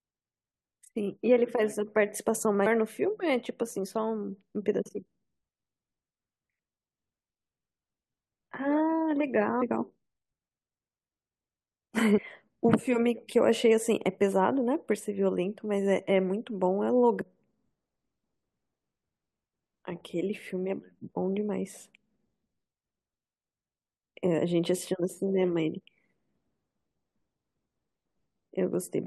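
Speech recording with compressed frames skipped at 2.65 s, 9.61 s, 12.17–12.19 s and 17.20 s. At each point roughly 100 to 150 ms of speech is missing, several 21.3 ms frames at a time.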